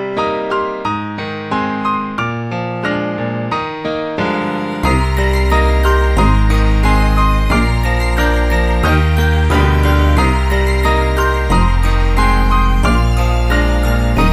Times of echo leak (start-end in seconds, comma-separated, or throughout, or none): none